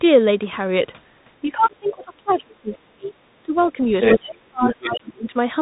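The whole speech clip passes through a Bluetooth CVSD headset codec. This narrowband codec codes one bit per sample and adapts its step size. Nothing above 3.8 kHz survives. The damage is plainly audible, with scratchy s sounds and a granular hiss.

From 1.43 to 3.78 s comes speech suppressed in double talk. The echo canceller likely could not tell the talker from the loudspeaker echo, so it turned both down. The voice dips by up to about 30 dB. Roughly two seconds are affected.

Inside that stretch, the other side's voice leaks through in brief scraps at 1.85, 2.29, 2.72 and 3.57 s. These sit about 25 to 30 dB below the speech. The canceller likely left residual loudspeaker sound in the microphone. At 4.02 to 4.18 s the leak is louder, about 5 dB above the speech.

From 4.15 to 5.35 s, double-talk suppression returns. The voice drops by up to about 30 dB, for roughly one second in total.

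Within it, from 4.62 to 5.13 s, the far voice leaks again, about 10 dB below the speech.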